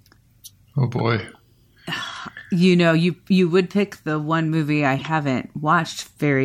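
At about 4.99 to 5.02 s there's a short glitch from a corrupt frame decoded: one compressed frame took bit damage and the decoder played it anyway, so misread values dump energy at the wrong frequencies, peaking around -20 dBFS, heard as a brief glitch in the speech.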